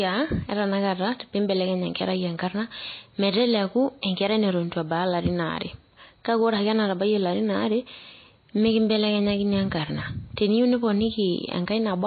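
Throughout the clip, the speech was likely squeezed through MP3 compression at a very low bitrate, which fits roughly 24 kbps. Starved of bits, the encoder cut everything above 4.6 kHz and dropped weak detail, leaving the voice dull, watery and swirly.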